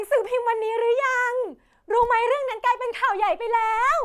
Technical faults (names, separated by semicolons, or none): none